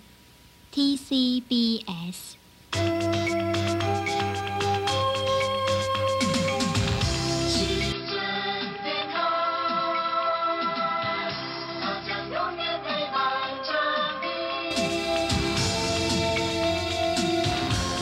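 At 7.92 s the audio abruptly turns duller and boxier, loses its top end above 5.5 kHz, drops a few decibels in level, and picks up a faint new background hiss sitting far below the signal. There is no gap at the change. At 14.71 s the fuller, brighter sound returns just as suddenly. This is likely an input switched to a poorer device, with the recording jumping to a narrower-band microphone or a headset's call profile and then back again.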